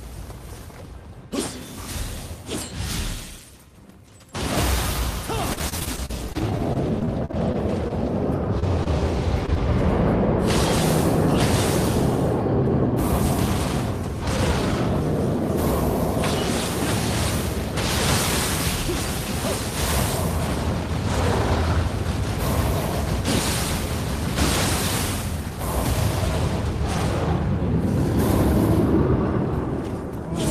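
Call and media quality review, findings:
Choppy, robotic audio from 5.53 to 9.58 s, with short pieces dropping out and smeared stretches between them. Repeated packet loss on the network path, with the receiver's jitter buffer and concealment stretching the last good audio across each hole. About 23 separate gaps, the longest 40 ms. Roughly 445 ms patched over and 320 ms lost outright, about 11 % of the stretch concealed.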